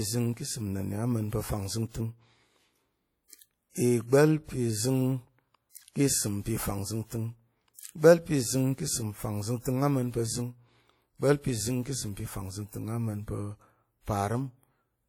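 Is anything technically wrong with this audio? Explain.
Yes. Throughout the speech, transform-codec damage is plainly audible, likely from WMA compression at a low bitrate, consistent with about 48 kbps. Long coding blocks smear quantisation noise over tens of milliseconds and drop weak spectral lines, giving ringing, washy sound with hiss that breathes with the signal.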